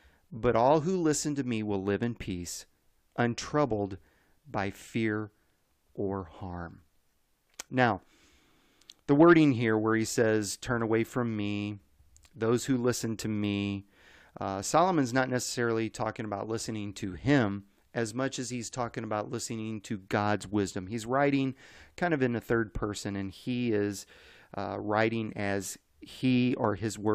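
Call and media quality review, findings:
No audible faults found in this speech recording; no dropouts, glitches or level problems to log against any component.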